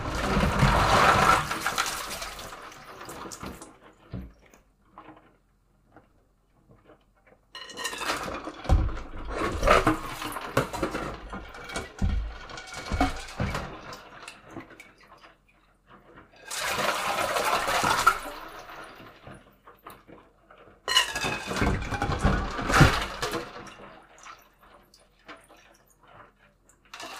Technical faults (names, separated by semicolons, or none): none